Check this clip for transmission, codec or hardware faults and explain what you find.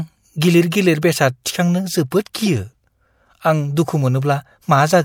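There's one fault in this speech, a corrupt frame decoded at about 2.46 s, hitting roughly two frames. It's a short, sharp blip, peaking at roughly -15 dBFS. Some bits in the compressed data got flipped, and the decoder played those frames anyway instead of concealing them. The misread gains and codes threw energy into the wrong frequencies across a couple of frames, which is why you hear a brief chirpy burst.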